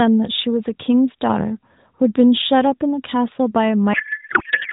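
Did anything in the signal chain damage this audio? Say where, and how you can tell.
Yes. At the codec stage, a codec payload misread: octet-aligned AMR frames were unpacked as bandwidth-efficient, so from 3.94 s to the end the speech turns to garbled, barely related warble.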